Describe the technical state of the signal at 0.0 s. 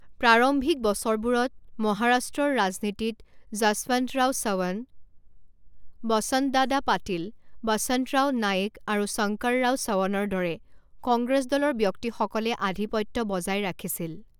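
At 0.0 s the signal is intact, with no audible fault at that moment.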